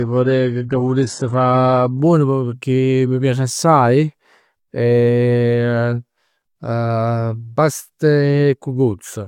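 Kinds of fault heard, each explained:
Adaptive stream starting at a low bitrate: for the first 2.0 s the speech is dull and smeary, with thin synthetic treble and strong codec artefacts, then it clears abruptly without a gap. The player began on a very low-bitrate rendition, around 12 kbit/s HE-AAC, and switched up to roughly 96 kbit/s AAC-LC once the connection was measured.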